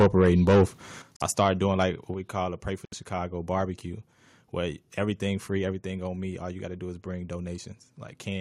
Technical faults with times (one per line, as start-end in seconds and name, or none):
0.00-0.63 microphone overload
1.02 microphone volume stepped down
1.16-1.22 Bluetooth stall
1.39-1.48 microphone overload
2.14 microphone volume stepped down
2.85-2.94 Bluetooth stall
5.72 microphone volume stepped down